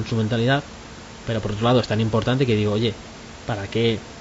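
Throughout the speech, low-delay AAC compression likely coded the signal in short frames that resolve pitch harmonics poorly. The voice turns rough and grainy, with noise between harmonics, consistent with AAC-ELD at about 32 kbps. Room noise sits about 18 dB below the speech.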